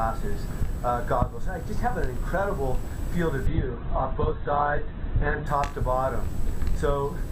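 From 3.47 to 5.47 s the adaptive stream switches to a lower bitrate: the sound abruptly loses everything above about 4.2 kHz and turns thin, with stronger codec artefacts. The drop fits a fall from roughly 64 to 8 kbit/s Opus. Quality then snaps back, with no gap at either change.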